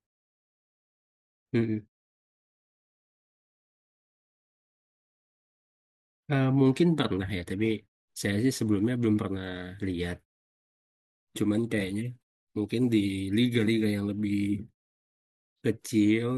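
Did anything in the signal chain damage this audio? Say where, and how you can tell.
No, nothing in the signal chain damaged this audio, so there is no stage to point to.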